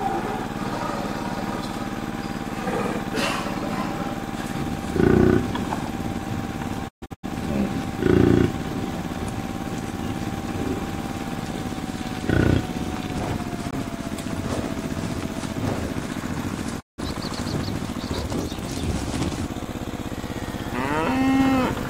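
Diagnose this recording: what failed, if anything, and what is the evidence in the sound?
Digital broadcast dropout at the receiver. Sound fades out within 20 ms at 6.87–7.28 s, in scattered holes, and again at 16.79–17.03 s. Failed frames were muted.

Block of digital silence in the buffer or playback stage. Abrupt gaps appear at 13.71–13.73 s and at 19.65 s. The second gap is 5.3 ms long and sounds like a tick, which fits a 256-sample buffer.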